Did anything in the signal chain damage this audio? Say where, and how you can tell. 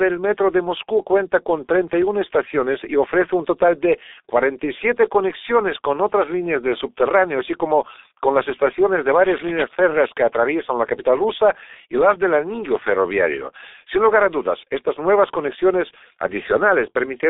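Yes, at two stages. At the codec stage, the whole clip carries heavy G.723.1 damage. The speech is muffled and hoarse with smeared consonants, confined to a telephone band of about 300 Hz to 3.7 kHz, with nothing above 3.8 kHz. That fits a G.723.1 stream at about 6 kbit/s. Its 30 ms frames and slow voice-model updates blur transients. On a spectrogram, the energy stops abruptly at a flat ceiling and the formants look coarse and blocky.

At the analogue wiring stage, there is cable scratch noise from 9.24 to 9.65 s, after "con las estaciones de" and before "férreas que atraviesan la". It is a burst of dense, uneven scratching that sits roughly 10 dB below the speech. The likely cause is a worn cable, connector or control carrying DC, whose contact resistance jumped rapidly as it moved. On a waveform it shows as jagged, irregular spikes riding on the speech. On a spectrogram it appears as a broadband speckled smear across that 0.41 s.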